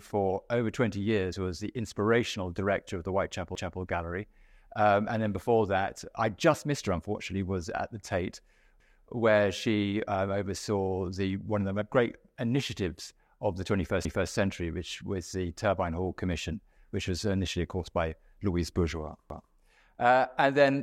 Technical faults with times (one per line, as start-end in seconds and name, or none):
3.55-3.80 overlapping chunks
8.80-9.05 overlapping chunks
14.05-14.30 overlapping chunks
19.30-19.55 overlapping chunks